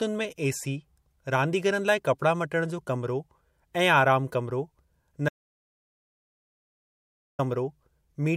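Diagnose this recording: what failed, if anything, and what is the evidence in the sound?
An audio dropout to silence runs from 5.29 to 7.39 s after "कमरो ऐं आराम कमरो": 2.1 s of silence, likely a lost input link.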